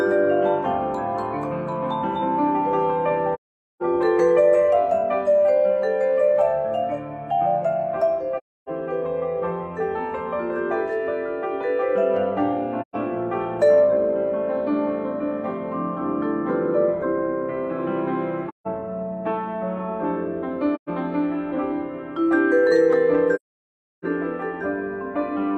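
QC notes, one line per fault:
3.34–3.82 s, AAC frame loss with muting: a soft-edged gap of about 0.47 s, which fits roughly eleven lost frames whose spectrum the decoder zeroed, faded by overlapping windows.
8.37–8.69 s, AAC frame loss with muting: about 0.3 s hole, consistent with around seven zeroed frames; window overlap ramps the sound down and back.
12.81–12.96 s, AAC frame loss with muting: a short dropout of about 0.13 s, likely three frames, with the decoder outputting silence that fades out and in smoothly.
18.48–18.67 s, AAC frame loss with muting: about 0.17 s of muted audio, pointing to four missing frames; overlapping windows soften both edges of the gap.
20.75–20.89 s, AAC frame loss with muting: another 0.13 s soft hole, fitting three lost frames zeroed by the decoder and blended in and out.
23.35–24.05 s, AAC frame loss with muting: the longest gap, about 0.68 s, which suggests sixteen consecutive lost frames; sound fades out, stays silent, then fades back in.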